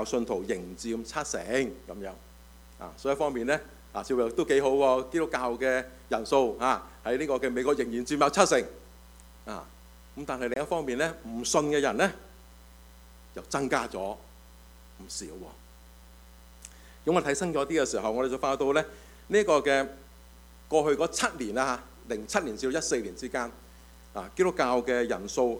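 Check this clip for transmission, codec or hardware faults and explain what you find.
One transmission fault is audible.

Bluetooth dropout, 10.54 to 10.56 s: a late packet was likely discarded, cutting a 23 ms silence before the sound resumes further on.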